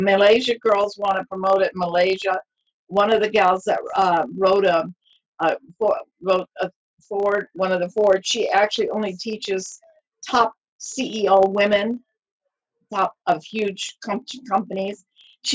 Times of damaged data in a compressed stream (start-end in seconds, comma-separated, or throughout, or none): none